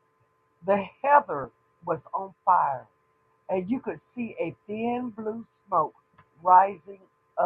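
Speech, with DAB burbling at 1.44 s: a very brief blip of noise in single sub-bands. Weak reception let bit errors slip past error correction into the MP2 samples and scale factors, pointing to a low error rate of around 0.15 percent.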